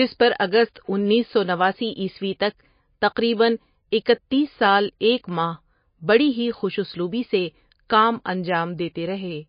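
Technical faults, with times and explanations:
Throughout: MP3 compression. The speech has nothing above 5.1 kHz, and the codec damage is plainly audible as a watery, smeared quality. The likely cause is an MP3 encode at a bitrate around 25 kbps. Starved of bits, the encoder drops the treble and zeroes weak frequency lines that flicker between frames.
0.74 s: pre-echo. A hiss lasting about 17 ms comes just before "انیس سو نواسی عیسوی". The codec spread its quantisation noise across the whole block. Noise sized for the loud onset filled the quiet moment before it, so the attack sounds soft.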